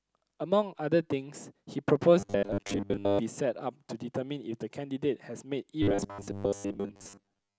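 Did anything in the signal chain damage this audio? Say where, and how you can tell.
Yes. There is robotic sound from repeated short buffers at 2.20–3.19 s and 5.83–7.58 s. The speech turns into a rigid metallic buzz locked at 100 Hz, which fits a 10 ms chunk replayed over most of the real audio, likely from a starved driver or buffer stage.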